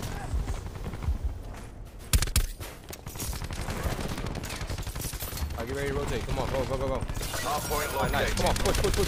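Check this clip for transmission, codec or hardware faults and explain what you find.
One fault is present. A block size mismatch (truncated) runs from 3.19 to 5.11 s. One stage hands over blocks longer than the next stage accepts, so the tail of every block is discarded. About a twelfth of the material disappears in each 10 ms block. The cuts repeat at 100 Hz, which is heard as a steady buzz, and the sound runs about 1.09 times faster while its pitch stays roughly unchanged.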